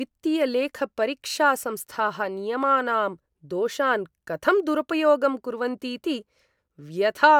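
No technical faults can be heard anywhere in the speech. Nothing in it marks a moment where the recording or playback chain went wrong.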